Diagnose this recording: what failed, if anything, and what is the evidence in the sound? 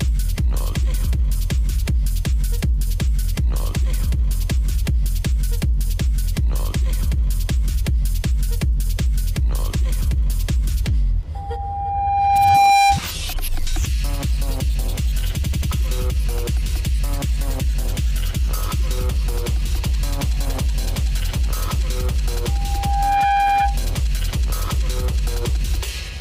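Loudspeaker feedback squeal in the acoustic loop: from 11.35–13.01 s and 22.48–23.80 s, loop gain above one grows a 799 Hz tone, a bright horizontal spectrogram line.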